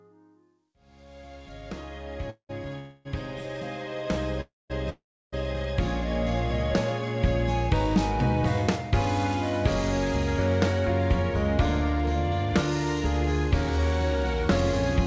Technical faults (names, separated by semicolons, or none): call audio freeze